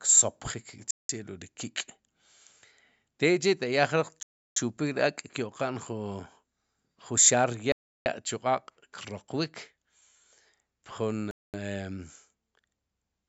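The speech drops to complete silence four times: at 0.91 to 1.09 s for 185 ms, 4.23 to 4.57 s for 336 ms, 7.72 to 8.06 s for 339 ms, and 11.31 to 11.54 s for 227 ms. These are likely Bluetooth stalls, where delayed packets left the headphone buffer empty until retransmissions arrived. Each gap appears as a flat line in the waveform and a clean vertical blank in the spectrogram, whose content stops at 8 kHz from the call processing.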